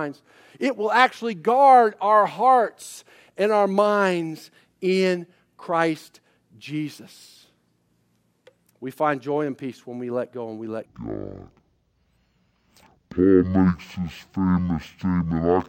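From 10.86 s to the end at 15.68 s, just after "go and we let", the speech turns into a stereo read as mono fault. Left and right samples are being consumed in sequence as though they were one channel, so each sample pair takes two sample periods. Playback runs at 0.5x and the pitch falls 12 semitones, a full octave, and a faint mirrored copy of the signal sits in the upper half of the spectrum.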